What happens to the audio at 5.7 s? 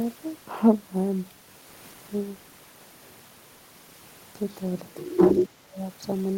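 At 5.7 s the speech is caught in a dip from 5.45 to 5.8 s. The level falls by up to roughly 25 dB. This is speech suppressed in double talk, likely an echo canceller that could not separate this side's voice from the loudspeaker echo and turned both down.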